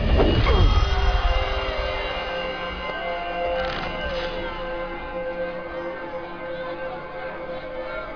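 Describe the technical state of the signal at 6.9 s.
At 6.9 s the signal is intact, with no dropout, distortion, clipping or other audible fault.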